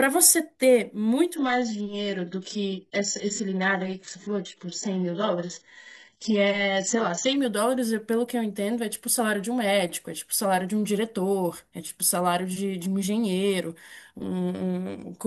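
From 1.36 s to 7.36 s the speech suddenly goes dull, with nothing above 8 kHz and more codec artefacts, then snaps back without any gap. That's an adaptive stream switching to a lower bitrate, and it sounds like a drop from 96 to about 8 kbit/s.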